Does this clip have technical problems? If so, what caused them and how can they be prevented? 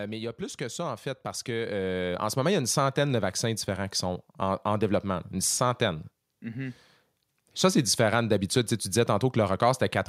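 Yes. Automatic gain rising runs from 0.37 to 2.65 s, after "mais il y a" and before "centaine de vaccins différents": the gain control judged the input too quiet and raised it by about 9 dB, so voice and background swell together. Fixing input level beforehand and disabling automatic gain prevents this.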